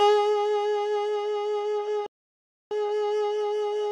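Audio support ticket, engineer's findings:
Playback stall, 2.06 to 2.71 s. Output drops to silence mid-flow for about 0.65 s, then sound resumes. Probable component: player output path. Mechanism: likely buffer underrun or blocked playback thread starving the device, so nothing reaches the output until data or the thread recovers.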